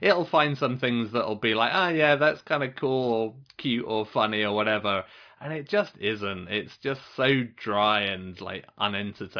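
No technical faults are audible anywhere in this speech recording.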